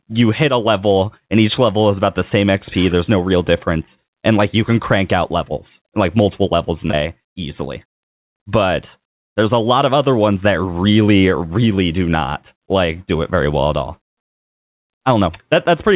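Short concealed packet loss at 6.90 s, right after "like multiple levels in": about 30 ms of audio never arrived in time, and the receiver bridged the hole by extending the preceding sound. The result is a tiny smear or wobble rather than a clean continuation, with the narrowband call sound, nothing above 4 kHz, carrying through.

Skip ahead from 6.91 to 6.94 s: roughly 150 ms of audio was discarded while later audio was already queued, so playback jumps forward. Only a brief 18 ms fill covers the join, so the speech lurches ahead.

Jitter buffer speed-up from 6.98 to 8.42 s: the buffer was still holding more audio than its target, so the receiver repeatedly trimmed small pitch-period slices, some 70 ms in total. Speech runs about 4% fast at unchanged pitch.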